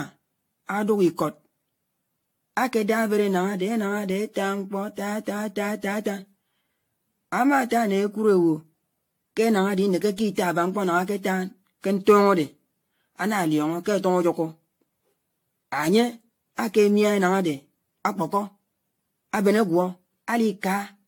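Generation loss runs through the whole clip: the speech sounds swirly, hollow and smeared, with blurred consonant attacks and nothing above 18.7 kHz. The likely cause is around ten successive lossy re-encodes, consistent with AAC-LC near 96 kbit/s, each adding fresh quantisation noise.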